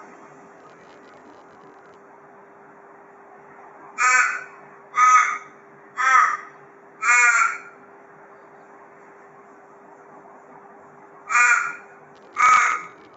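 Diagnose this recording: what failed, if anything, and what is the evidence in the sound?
A noise suppressor applied to music or sounds sits in the call processing and acts throughout. Held tones and decaying tails are pulled down by roughly 10 dB while onsets pass, so the level pumps and thins. Unlike codec artefacts, it follows the sound's steadiness, not its spectrum.

Processor overload crackle, a driver or buffer fault, runs from 0.58 to 1.95 s and again from 12.16 s to the end. Missed deadlines replay fragments of old audio with hard edges, which fits buffers of about 10 ms. The dense, gritty tearing sets it apart from isolated network dropouts, and the nothing-above-8 kHz call bandwidth doesn't mask it.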